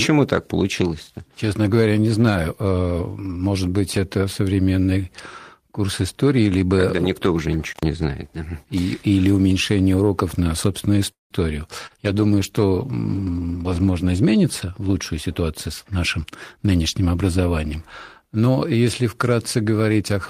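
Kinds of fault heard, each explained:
Intermittent contact: a loose connection opened briefly around 7.69 to 7.83 s, cutting the speech for about 98 ms with crackle at both edges; the waveform shows a near-flat gap bracketed by sharp clicks, visible as vertical broadband streaks on a spectrogram.
Call audio freeze: at 11.11 to 11.34 s the sound stalls, with the last sound stretched and fading, then about 150 ms of silence before speech resumes where it stopped; this is likely a drained jitter buffer, adding 191 ms of delay and losing nothing, seen as a smeared tail then an empty band.
Short concealed packet loss: around 11.86 to 12.02 s about 40 ms of audio never arrived and was filled by extending the preceding sound, giving a brief smear or wobble; the spectrogram shows harmonics or noise held unnaturally steady for a few hundredths of a second before real audio blends back.
Call bitrate drop: from 12.04 to 14.51 s the encoder rate falls from 32 to 17 kbps, lowest for about 1.9 s, so the speech turns coarser, rougher and more muffled; a spectrogram shows the upper frequencies cut off and a blotchier texture until quality returns.
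Jitter buffer speed-up: from 14.44 to 16.59 s the receiver trimmed short pitch-period pieces repeatedly to shed excess delay, running the speech at about 109% speed with unchanged pitch, roughly 200 ms removed; the waveform looks compressed in time, the spectrogram shows syllables packed closer together.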